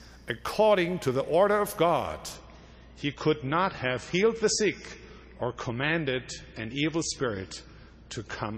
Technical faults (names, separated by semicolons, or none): adaptive stream at a lower bitrate